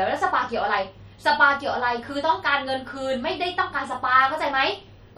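A speech clip with MP3 compression damage throughout. The artefacts are plainly audible: a watery, swirly texture and smeared attacks. This likely comes from a low-rate MP3 encode, around 48 kbps, whose starved bit budget zeroes weak frequency lines that flicker between frames.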